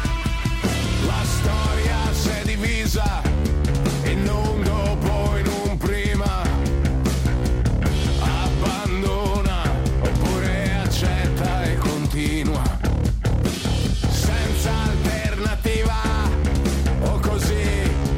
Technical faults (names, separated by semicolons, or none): none